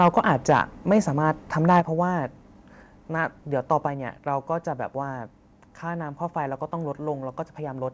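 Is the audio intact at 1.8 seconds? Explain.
No. Microphone overload runs from 1.69 to 1.80 s: peaks about 2 dB over full scale have their tops flattened, giving a harsh crackle, likely from input set too high. At 1.80 s the microphone volume is stepped down: everything drops about 6 dB at once, likely the call software cutting input gain after that clipping.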